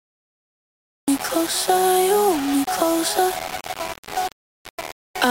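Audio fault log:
Throughout: low bit depth without dither. A coarse, gritty distortion rides on the sound and changes character with it, harshest in quieter passages. The likely cause is the audio being held at about 4 bits and rounded to the nearest step, with no added noise to break up the error. At so few levels, the error tracks the waveform. It sits roughly 10 dB below the signal, so the grain is prominent.
0.00–1.08 s: cut-off start. The clip opens on dead digital silence, and sound appears abruptly at 1.08 s, already partway through, with no attack or fade-in. The recording or stream began late, so the onset of whatever was sounding was lost and playback jumps straight from silence into the sound. That sudden step from silence to an active waveform is why the entry sounds chopped.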